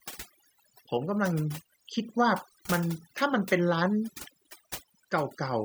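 From start to finish, the background between phrases drops to an unnatural near silence scattered with twinkling, chirping specks. This is overdone noise removal: a noise reduction process set far too aggressively clamps individual frequency bands down or out whenever they sit close to its noise estimate. Quieter components of the speech fall below that threshold too, so they vanish along with the noise, leaving isolated residual tones.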